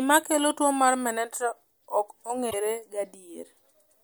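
A speech recording in which MP3 frames were likely dropped, leaving a broken MP3 bit reservoir: the next frame reached back for borrowed data and decoded bytes from another frame. From 2.50 to 2.54 s the sound jumps ahead with a brief disruption, about one or two frames long, which fits a 26 ms frame.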